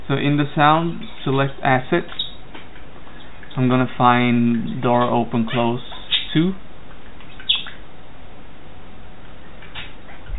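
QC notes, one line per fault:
No faults found on this pass; nothing to log.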